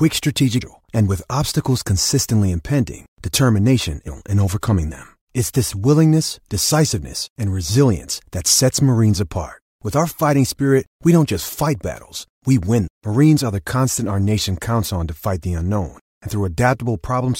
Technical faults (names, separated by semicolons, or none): damaged data in a compressed stream